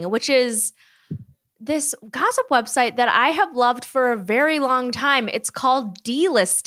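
No technical faults can be heard anywhere in the recording, and the signal stays steady and intact throughout.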